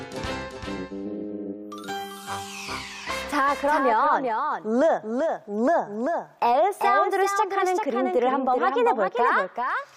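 From start to finish the clip carries a doubled audio track: a second, full-band copy of the same sound trails the original by roughly 400 ms, sitting around 5 dB lower. It has no decay tail or added room character, so it reads as a distinct, dry repeat rather than reverberation. The likely cause is the signal being picked up twice, once through a slower path, or an edit that left two copies offset in time.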